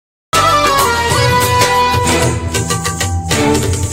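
From 0 to 0.33 s the file holds digital silence, and at 0.33 s the sound appears abruptly, already under way. This is a cut-off start: capture or streaming began late, after the sound had started, so the opening portion was never recorded. The onset has no natural attack or fade-in. The level jumps straight from nothing to a sound already in progress, and the beginning of that event is missing.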